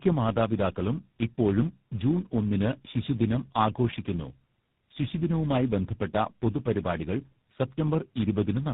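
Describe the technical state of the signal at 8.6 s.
At 8.6 s the speech carries a steady buzz near 99.6 Hz. This is a block size mismatch (padded). One stage hands over shorter blocks than the next stage expects. The leftover space in each block is filled with silence. That tiny gap repeats at the block rate and makes the buzz. The fault runs through the whole clip. Playback is slowed to 0.996 times normal speed.

The same moment also shows tandem speech coding, again present throughout. The speech sounds rough, muffled and warbly, more so than one low-rate codec would make it. Each coder in the path re-encodes the damaged output of the one before, so the errors stack up. The character points to about three speech codecs in a row, ending in something like GSM full rate. Nothing is heard above 3.8 kHz, which explains the dull, boxed-in tone.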